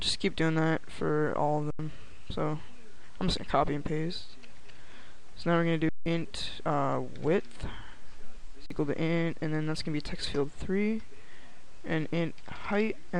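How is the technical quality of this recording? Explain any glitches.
Three short dropouts mar it. At 1.71 s (85 ms), 5.89 s (171 ms) and 8.66 s (43 ms) the waveform freezes flat and the sound stops, then resumes, having skipped roughly 100, 150 and 40 ms. Each is an underrun with held sample: the output buffer ran dry, the converter held its last value, and incoming audio was lost meanwhile. The lengths fit 4096-, 8192- and 2048-sample gaps.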